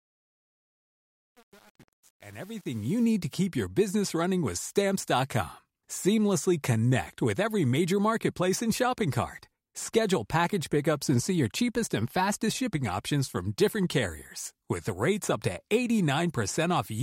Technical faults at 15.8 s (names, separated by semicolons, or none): none